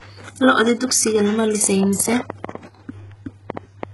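The speech appears to have been likely squeezed through HE-AAC compression at a very low rate, which fits a bitrate around 12 kbps. The encoder keeps only the lower spectrum and fills the treble by spectral band replication, copying lower bands upward under a coarse envelope, and nothing survives above 11.4 kHz. Throughout the clip the damage is heavy: the synthesized top end doesn't line up with the real harmonics, so s sounds come out gritty, metallic or lispy.

From 1.64 s to 3.84 s, something injects a train of clicks, likely interference from nearby equipment or a faulty connection or power supply. About 15 pulses of much the same shape arrive at an irregular pace, averaging about 5.5 per second, and rise roughly 10 dB above the speech. They ride on top of the speech and continue through the pauses.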